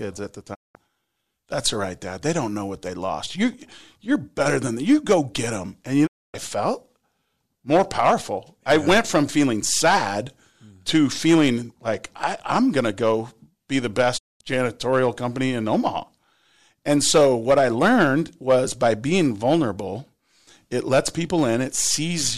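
The speech drops out three times, each a quick 20 ms fade to silence and then a clean return: from 0.53 to 0.77 s just after "at the", from 6.05 to 6.36 s, and from 14.17 to 14.42 s between "to go be the" and "janitorial company in". These are digital broadcast dropouts. The receiver lost the signal or rejected corrupted frames and muted until valid data resumed, so roughly 0.2 to 0.26 s of programme is simply gone each time.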